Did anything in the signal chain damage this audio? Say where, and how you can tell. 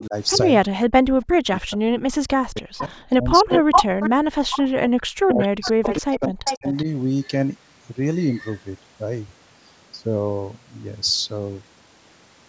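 Yes. Speech suppressed in double talk, in the call processing stage: the level ducks at 0.0–0.15 s (about 15 dB), 0.61–0.78 s, 1.23–4.22 s and 4.8–6.86 s (about 40 dB at worst). The echo canceller likely mistook overlapping talk for echo. Gain dips, not clicky packet gaps, set it apart from network loss.

Echo leak, also in call processing: a delayed copy of the speech returns at 2.78 s, 3.5–4.64 s and 5.43–6.84 s, from about 10 dB below to about 5 dB above the speech. The residual echo likely escaped cancellation. A fixed 377 ms offset marks it as echo, not room reverberation.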